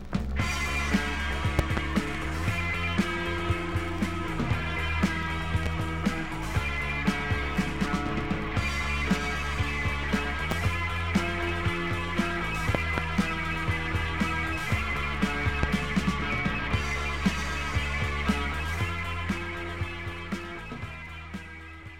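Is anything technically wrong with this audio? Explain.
Yes. There are loud pops, double at 1.59–1.80 s and 12.75–13.01 s and single at 5.66, 10.51 and 15.63 s. A likely voltage pulse from a plug, switch or static thumps far above the sound, which continues underneath. On the waveform each is a tall spike, and on the spectrogram a thin, full-height vertical stripe.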